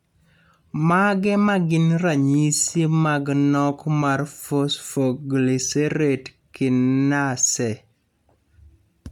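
A speech recording with a breathy, grainy edge throughout, the upper spectrum partly replaced by noise fill while the band still reaches about 20.2 kHz. This is likely Bluetooth LC3 compression, and the plainly audible damage fits 10 ms frames at around 48 kbps.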